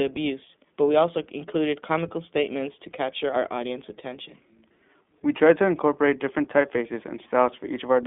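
iLBC codec damage runs throughout the speech, and it is plainly audible. The band stops near 3.7 kHz, and each short frame is coded on its own, leaving a rough, synthetic edge that points to the 15.2 kbps, 20 ms mode.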